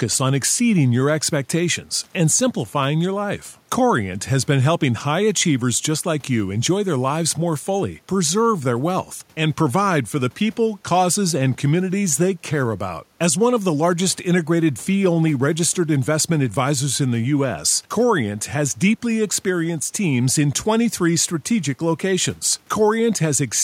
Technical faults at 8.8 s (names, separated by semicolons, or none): none